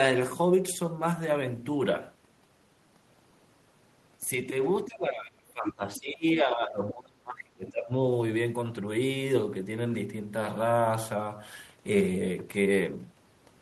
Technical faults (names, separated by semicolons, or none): speech suppressed in double talk; other side's voice leaking through